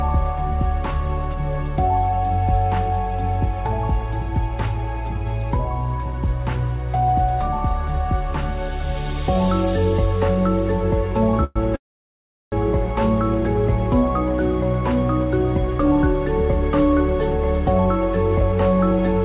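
At 11.44 s the sound stalls for about 0.12 s in a call audio freeze, likely packets held up so the jitter buffer ran dry. The tail is stretched into a brief fading buzz, then the sound resumes. A longer freeze follows from 11.76 to 12.54 s: after a short fade it sits silent for about 0.73 s, then picks up exactly where it left off. Nothing's lost, but the delay grows by roughly three quarters of a second. From 18.41 s to the end there's a jitter buffer speed-up. The receiver trims short pitch-period slices, around 40 ms in total, to shed built-up delay, so the audio runs about 4% fast at unchanged pitch.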